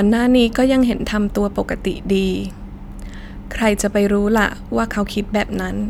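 Nothing goes wrong anywhere in this recording; there's no technical fault to point to at any moment.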